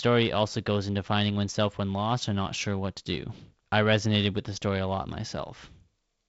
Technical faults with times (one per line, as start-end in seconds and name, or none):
none